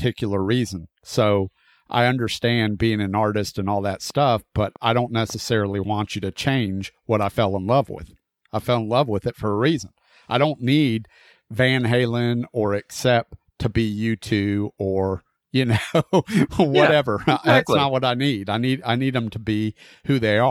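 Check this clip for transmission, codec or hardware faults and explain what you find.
One fault is present: a train of clicks from 4.10 to 5.55 s. About seven near-identical clicks arrive at an uneven pace, around 4.2 per second. They peak at roughly the speech level. Repeated pulses from interference or a faulty connection or power supply are the likely cause. They are heard as irregular ticking over the speech.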